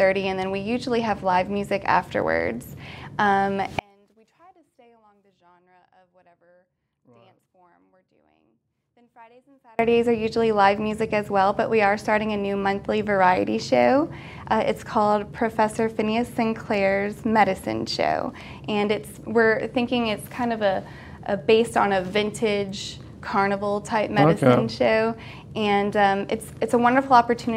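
One channel inverted, 3.79 to 9.79 s: the sound drops about 36 dB to a faint residue, likely from reversed polarity on one channel cancelling the shared content when summed.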